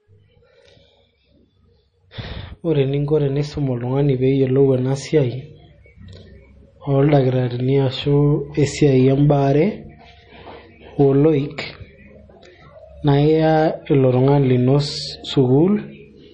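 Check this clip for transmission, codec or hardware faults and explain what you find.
There's one problem, and it runs through the whole clip: it sounds like MP3 compression, most likely at a low bitrate, around 32 kbps. Nothing comes through above about 9.3 kHz, and the speech has a plainly audible watery swirl, because the starved encoder drops weak frequency lines that flicker between frames.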